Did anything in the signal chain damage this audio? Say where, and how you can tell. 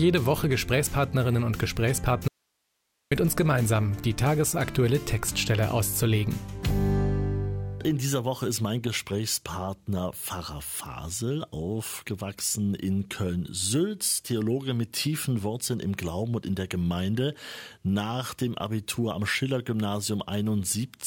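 Yes: a likely intermittent analogue connection broke the signal from 2.28 to 3.12 s, an audio dropout to a faint residue leaving only hiss about 50 dB down.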